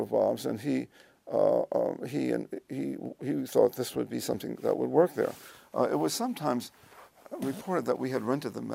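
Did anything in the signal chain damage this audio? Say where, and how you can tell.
No, nothing in the chain left a mark I can hear here; every stage from capture to playback seems to have handed the signal along without leaving a trace.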